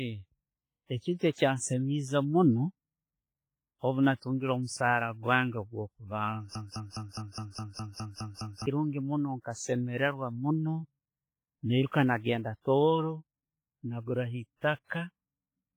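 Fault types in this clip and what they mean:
WMA compression: Throughout the speech there is a ringing, washy quality with hiss that swells and fades with the signal, likely from a WMA encoder at 24 kbps doing heavy damage. A spectrogram shows weak upper detail blanked into gaps, with smeared noise across each block.
broken-record loop: From 6.55 to 8.66 s a 206.5 ms fragment repeats exactly, back to back, ten times, likely from a stalled player or stream resending its last chunk. Whatever should have played then is lost. The waveform shows an identical shape tiled end to end.
pre-echo: At 11.87 s a sharp attack is preceded by about 44 ms of hiss, so the onset sounds softened and smeared. The codec spread its block's noise into the quiet gap before the attack, which shows as a faint broadband haze ahead of the transient on a spectrogram.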